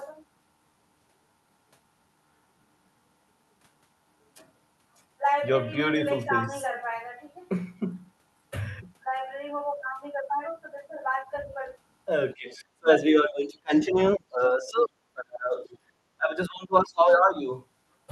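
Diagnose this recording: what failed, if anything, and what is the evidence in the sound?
Call processing: speech suppressed in double talk from 12.34 to 17.49 s, dipping up to about 30 dB for roughly 4 s, likely the echo canceller attenuating both sides.

Call processing: the other side's voice leaking through at 12.5–12.63, 13.75–13.79 and 15.66–15.78 s, about 25 to 35 dB down, likely loudspeaker echo left by the canceller.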